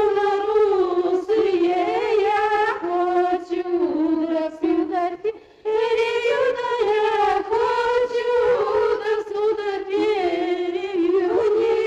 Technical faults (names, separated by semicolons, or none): compressed frames skipped